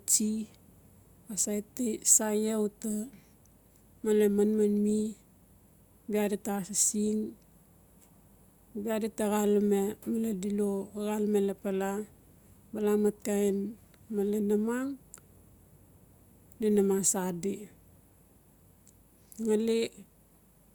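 No technical faults are audible.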